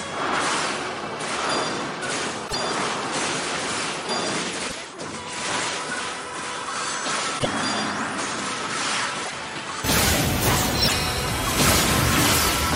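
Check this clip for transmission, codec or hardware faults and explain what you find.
Two faults are present: a change of input device and five bursts of damaged compressed data.

From the start to 9.84 s, the band stops at about 10.5 kHz, the level sits roughly 10 dB lower, and a steady noise floor lies well below the signal, some 35 dB down. At 9.84 s the sound opens up with no gap. This is likely an input switched to a poorer device. A microphone or headset profile with a narrower band and its own noise explains why the whole tone and floor change together, rather than a single artefact appearing.

Damaged data in a compressed stream shows up at 2.44–2.55 s, 4.64–4.75 s, 7.36–7.47 s, 9.21–9.33 s and 10.83–10.94 s. Each is a brief glitch lasting about 0.11 s, as the decoder misreads corrupted frames and resyncs at the next header.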